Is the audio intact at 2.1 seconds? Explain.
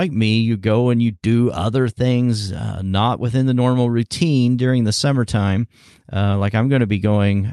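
Yes, the audio is intact at 2.1 seconds, with nothing there beyond the ordinary character of the call path it passed through.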